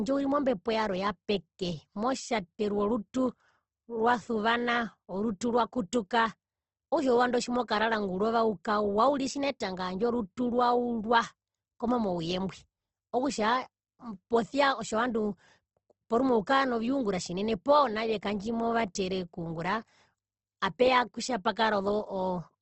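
From start to finish the speech sounds grainy and rough, with a noisy fizz sitting on the vowels and nothing at all above about 8.2 kHz, so the top end is cut off cleanly rather than swirling. The cause is likely Opus compression in its music-oriented CELT mode at a rate that fits roughly 16 kbps: the encoder keeps each band's energy but, short of bits, fills band detail with noise or folded copies of lower bands, turning tonal parts gritty.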